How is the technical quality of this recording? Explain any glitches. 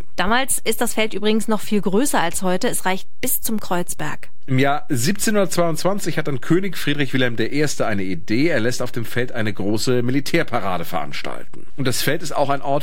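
The recording carries one fault, present for its whole length: a DC offset. The entire speech waveform sits displaced from zero by a fixed amount, about -19 dBFS, as if a constant voltage were added to the signal. Because that shift is a steady value at 0 Hz, it cannot be heard, yet it eats headroom on one side of the waveform. Unlike mains hum or rumble, which produce an audible low tone or murmur, this appears only as a constant bar at the very bottom of the spectrum.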